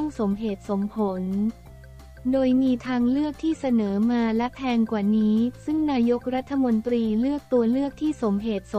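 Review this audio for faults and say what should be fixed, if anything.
Grainy distortion follows the sound throughout and roughens quiet passages. The likely cause is low bit depth without dither, consistent with truncation to 9 bits. Keep full resolution through processing, and add dither before any reduction in bit depth.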